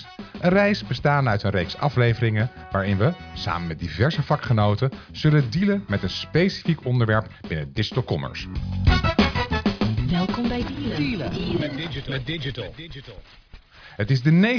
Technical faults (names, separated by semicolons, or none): none